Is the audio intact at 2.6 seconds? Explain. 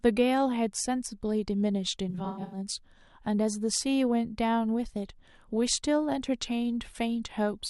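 No, not quite. AAC frame loss with concealment runs from 2.09 to 2.58 s, ending just before the 2.6 s mark. Across that 0.43 s stretch about 277 ms of audio is missing in scattered gaps, the longest around a tenth of a second, which points to roughly a dozen dropped frames. The decoder patches each hole by rebuilding from the last good spectrum, so the sound turns smeared, noisy and phasey rather than cutting cleanly.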